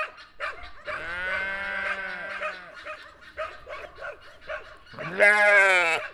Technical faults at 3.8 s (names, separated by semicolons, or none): doubled audio track